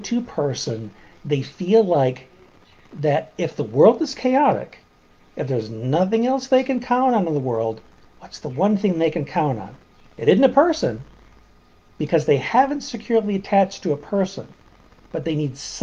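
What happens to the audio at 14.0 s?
Nothing goes wrong at 14.0 s; the audio plays through that moment intact, with no dropout, click, distortion or other fault to be heard.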